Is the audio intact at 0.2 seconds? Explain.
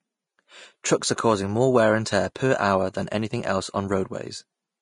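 No, Vorbis compression affects the whole speech clip, including 0.2 s: nothing above 10.5 kHz, with coarsely quantised treble turned into grainy hiss, likely a low-bitrate encode near 34 kbps.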